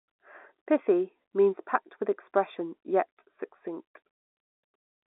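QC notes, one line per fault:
Throughout: channel delay (comb filtering). One channel lags the other by roughly 0.15 ms, so the mono sum cancels a fixed notch near 3 kHz, leaving the speech hollow at the top. Unlike the telephone band edge, it is a dip, not a roll-off.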